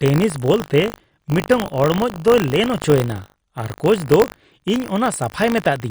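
Speech runs through the whole clip with two faults present from start to finish. The first is a watery, swirling texture with smeared consonant attacks and the treble cut at a fixed frequency, likely MP3 compression at a low bitrate around 48 kbps. On a spectrogram the treble stops at a flat ceiling, with scattered time-frequency cells flickering on and off between frames. The second is buffer tearing, a robotic buzz at 50 Hz that is present only while speech is sounding. A tiny slice of each period, roughly a couple of percent, is replaced by audio from about 70 ms earlier, with abrupt joins on both sides. The waveform shows regular step discontinuities every 20 ms, and the spectrogram shows thin vertical clicks at that spacing.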